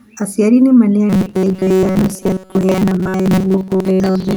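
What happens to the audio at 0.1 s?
Nothing goes wrong at 0.1 s; the audio runs through that moment intact, with no dropout, click or distortion to be heard.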